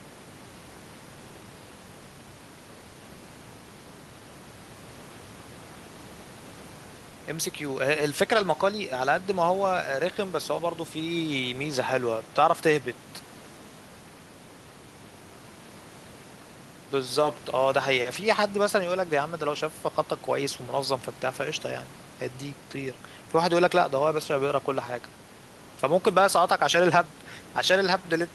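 No technical faults can be heard anywhere in the speech recording. There is nothing to place on the timeline, so no times are given.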